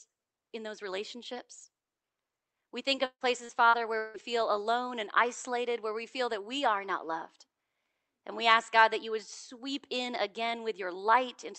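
From 2.95 to 4.18 s the speech breaks up with repeated packet loss, giving that robotic sound. Five gaps land close together, the longest about 158 ms. Each one gets patched by stretching the last bit of sound, so about a third of that stretch is filler and comes out choppy.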